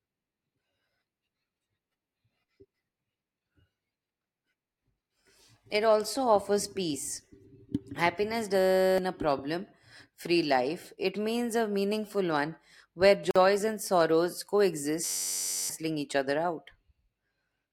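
Speech, broken twice by a system hang loop. From 8.59 to 8.98 s and from 15.04 to 15.70 s, a 10.67 ms slice repeats at 93.8 Hz, giving a steady buzz. That fits a frozen driver cycling a 512-sample buffer. Roughly 0.4 s of speech and then most of a second are lost. At 13.31 to 13.36 s, a 47 ms silence cuts in with smeared edges. This is a gap at a join of encoded pieces, where encoder delay and frame padding were left in.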